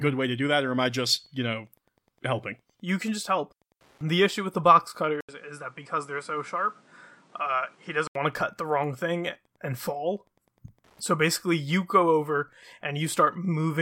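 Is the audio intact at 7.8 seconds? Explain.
No. From 5.21 to 8.15 s you're hearing what's likely an input switched to a poorer device. After an 80 ms gap the sound turns dull, with nothing above 10.8 kHz, drops a few dB in level, and picks up a new noise floor about 30 dB down.

Wi-Fi interference is also there at 7.8 s, as it is through the whole clip. A nearby radio's beacon every 102.4 ms gets rectified by the audio circuit, so there's a faint, steady tick about ten times a second, roughly 40 dB below the sound.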